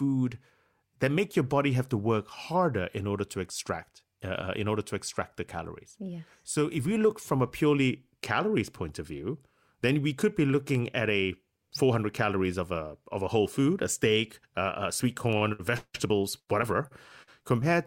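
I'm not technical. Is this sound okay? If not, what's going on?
No, there are two tiny clicks, at 10.75 s right after "then we could be" and at 15.33 s after "a sweet". These are likely dropped samples, where a sliver far shorter than a millisecond goes missing and the waveform jumps.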